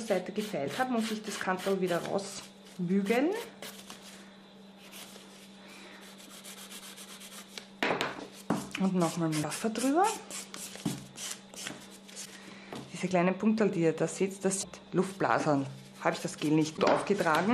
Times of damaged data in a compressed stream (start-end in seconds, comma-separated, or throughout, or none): 9.39-9.45, 12.21-12.27, 14.59-14.65, 16.73-16.79